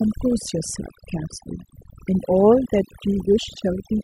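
From start to finish, the speech carries overdone noise removal. A noise reduction stage was pushed too hard. It cuts individual frequency bands near its noise estimate, taking quiet parts of the voice too. The background drops and breaks up into twinkling specks.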